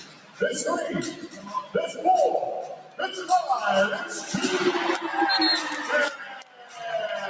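A noise suppressor applied to music or sounds, built for speech, stays active across the whole clip. It treats sustained tones, ambience and decay as noise, so the level swings by roughly 15 dB, and the sound pumps and thins where it should hold steady. The call's microphone processing passes nothing above 8 kHz.

Sound cut by the noise suppressor occurs four times, where the suppressor pulls whole passages down harder than the rest: 0.0 to 0.41 s by about 12 dB, 1.13 to 1.75 s by about 11 dB, 2.75 to 3.0 s by about 11 dB, and 6.18 to 6.82 s by about 13 dB. Each stretch sinks in level.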